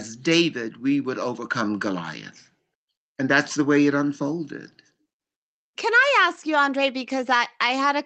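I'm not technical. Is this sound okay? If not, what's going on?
Yes, this speech sounds fine, with nothing going wrong in it, just the slightly narrower sound you'd expect from an ordinary internet call.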